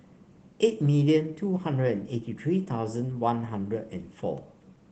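Opus voice compression runs through the whole speech clip. In hybrid mode the lower band is coded by linear prediction and the top, above 8 kHz, is coded sparsely. At a rate that fits roughly 16 kbps, coarse excitation leaves the speech hoarse and slightly robotic.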